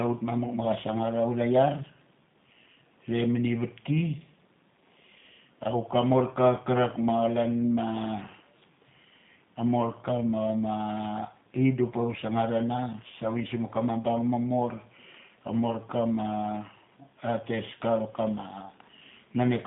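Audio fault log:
Throughout, G.729 codec: the speech was rebuilt by a low-rate predictive voice coder, which fits 8 kbit/s G.729A, from a filter, pitch predictor and sparse pulses. The band runs only 150 Hz to 3.7 kHz, so the voice sounds muffled and plainly rough and synthetic.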